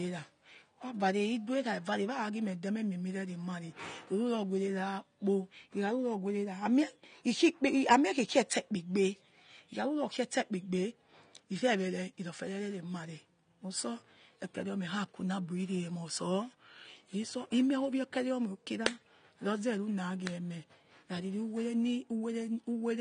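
From start to finish, the speech sounds dull and smeared, with nothing above about 9.7 kHz and a fizzy, warbling texture that is plainly audible on sibilants and held vowels. This is likely AAC compression, specifically AAC-LC at a low bitrate, with the damage fitting roughly 32 kbps. To stay within that budget, the encoder lowered its cut-off and coarsely quantised the remaining spectrum, leaving thin or noise-filled bands that shimmer as each frame changes.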